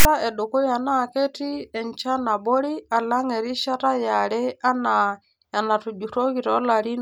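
A block of text tags at the head of the file is read as if it were samples, so the first 0.05 s (0.00 to 0.05 s) plays back as file tags played as audio: a harsh, lopsided rasp with abrupt edges, ahead of the speech.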